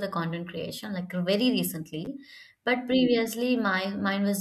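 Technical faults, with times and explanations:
2.05–2.07 s, chunks out of order: just after "content creation like very", two 10 ms pieces of the speech swap places, with one chunk arriving a single chunk late and playing after the piece that should follow it. No audio is missing, but the sequence is wrong for about 20 ms. The three hard joins this creates produce a brief jumbled texture, which points to a late write or delivery in a chunked buffer.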